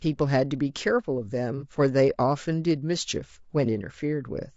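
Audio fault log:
Throughout: low-delay AAC compression. The speech is rough and grainy, with noise filling the gaps between pitch harmonics and a thin, synthetic-sounding top band. This is likely AAC-ELD at a bitrate around 32 kbps, whose low bitrate leaves too few bits to code voice harmonics cleanly.
1.58–1.63 s: AAC frame loss with concealment. A brief smeared, noisy patch of about 30 ms, which fits a single lost frame. The decoder rebuilt the gap from the preceding spectrum, so the sound blurs momentarily rather than dropping to silence.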